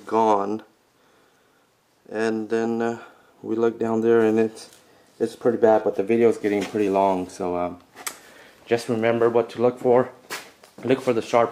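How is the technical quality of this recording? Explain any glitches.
No glitches turn up anywhere in the recording: the signal holds steady throughout, with no dropouts, interruptions or other disturbances to the audio path.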